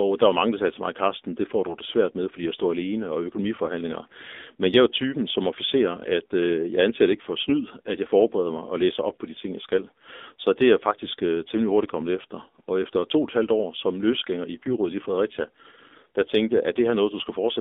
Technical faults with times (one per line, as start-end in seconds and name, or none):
0.00-17.61 AMR narrowband mobile codec
14.64-14.73 AMR bit errors